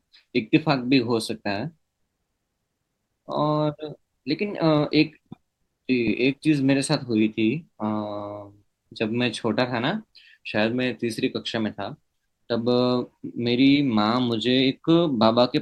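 Compressed frames skipped at 6.07 s and again at 13.75 s. Whole blocks of the encoded stream never reach the output, so the sound jumps forward by roughly 20 ms at the first point and roughly 10 ms at the second, which fits two frames and then one frame of about 10 ms each.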